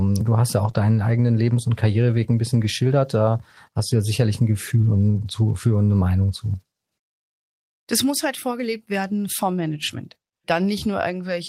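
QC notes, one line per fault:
0.63–0.69 s: lost packet rebuilt from error correction. About 40 ms of audio went missing, which fits two separate 20 ms packets. The following packet carried a low-bitrate backup copy, and the decoder played it. So there is no gap. The sound turns briefly grainy and noisier because the backup is coded far more coarsely.
0.71–0.75 s: short concealed packet loss. About 20 ms never arrived in time, with no backup copy. The decoder extended the preceding sound for about 15 ms and then crossfaded into the real signal. The result is a brief smear or wobble. Any short transient in that instant can disappear.
0.75–0.77 s: lost packet rebuilt from error correction. Immediately after, one more packet, about 20 ms, was replaced by its low-bitrate copy. The rough, noisy texture extends this damaged stretch.
9.88–9.94 s: lost packet rebuilt from error correction. About 40 ms, consistent with two lost packets, was rebuilt from backup copies. 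There is no dropout, just a short rough, noisy patch.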